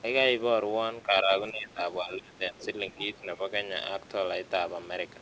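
Around 1.04–1.31, 1.51–1.8, 2.01–2.99 and 3.16–3.39 s the speech sags, worst at roughly 25 dB down in the third patch. That's speech suppressed in double talk, likely the echo canceller ducking everything while both sides talk. During and just after that dip, at 2.61–2.66 and 2.87–3.06 s, you get the other side's voice leaking through, faint at roughly 20 to 25 dB under the talker, likely loudspeaker echo the canceller missed.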